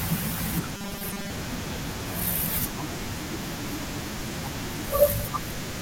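From 0.77 to 1.3 s, new audio likely arrived too seldom, so a stretch of about 5 ms kept being replayed while most of the real signal was skipped. This robotic sound from repeated short buffers imposes a rigid, metallic 200 Hz buzz on the speech.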